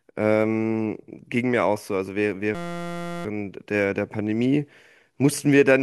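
A speech clip in which, from 2.55 to 3.25 s, the sound suddenly gives way to a steady, flat buzz pitched at about 172 Hz before normal audio resumes. This is a system hang loop. The computer or audio driver stalled while the sound hardware kept replaying the same tiny stretch of its ring buffer, a 5.8 ms segment repeated over a hundred times, which fits a 256-sample buffer. Because that loop is so short, the repetitions fuse into a tone rather than a stutter, and almost no audio is lost.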